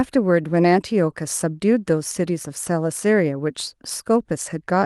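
No technical faults can be heard anywhere in this speech clip. There is no moment in it that needs a timestamp.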